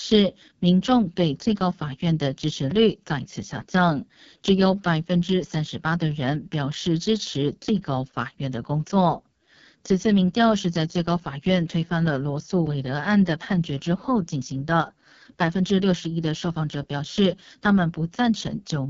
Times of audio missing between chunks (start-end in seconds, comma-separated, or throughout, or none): 2.71, 7.69, 12.67